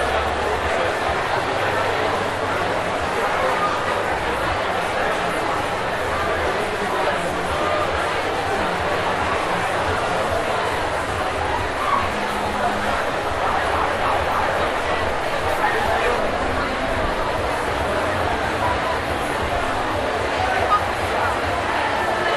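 No technical faults can be heard anywhere in this recording of sounds. Nothing in it points to a problem in capture, processing or playback.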